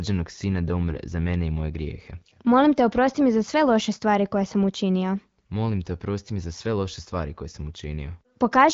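AMR bit errors strike from 0.90 to 0.99 s, between "sina da" and "za mene i moje". On a weak link, a few percent of the less protected bits in these frames arrived flipped, misplacing the excitation pulses and skewing pitch, gain and spectral detail, so the speech briefly turns hoarse, scratchy and gargly while keeping roughly its pitch and level.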